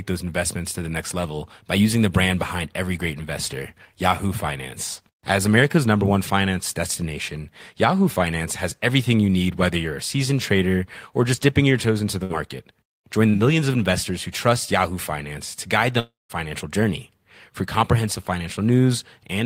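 At 12.23 to 12.32 s, just after "your toes into the", a burst of packet loss cut off a short run of the incoming speech, about 60 ms of it. The receiver bridged the hole by extending the last received sound for around 63 ms and fading it as it went, so the voice turns briefly into a held, dimming buzz or hiss before speech resumes slightly further along, with that fragment gone.

Around 13.30 to 13.35 s, immediately before "millions of investors who", a short concealed packet loss occurred. Roughly 40 ms of audio failed to reach the decoder in time, and it synthesised about 38 ms from the preceding sound before blending back into the real signal. The result is a quick smear or wobble at the start of that phrase rather than a clean onset.

From 15.99 to 16.31 s, right after "to guide", a long network dropout, likely caused by the connection stalling, left about 0.3 s of speech undelivered. 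The receiver first continued the last sound as a fading buzz or hiss, which dies away into silence for roughly the final 0.17 s of the gap. Speech then returns further on, and the portion that was lost in between never reappears.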